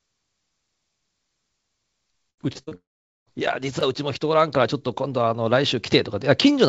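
From 2.30 to 2.73 s the speech turns choppy, with pieces dropping out. This is repeated packet loss (robotic sound): five separate holes open within that span, the longest 72 ms, and each is patched by stretching the last bit of sound before the next loss arrives. About 39% of the span ends up synthesised rather than real.

Almost immediately after, from 2.75 to 3.28 s, the sound smears into a brief fading buzz and then goes to near silence for roughly 450 ms before the speech resumes further along, with about half a second of it simply gone. This is most likely a long network dropout. Nothing arrived for that stretch, so the receiver extended the last sound until that faded, then held quiet until the stream returned.

At 3.81 s a tiny click interrupts the audio, a hole of just 2.9 ms. This is a block of digital silence, a run of zeroed samples with hard edges and no fade, and its length fits a 128-sample buffer that was not filled in time. 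Throughout, the call codec leaves nothing above 8 kHz, consistent with G.722 at 64 kbps.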